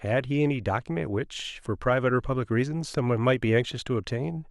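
Nothing in the speech here points to a technical fault; there's nothing to flag at any point in the recording.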